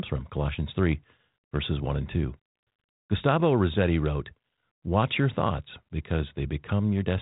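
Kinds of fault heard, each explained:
No faults can be heard anywhere in this recording.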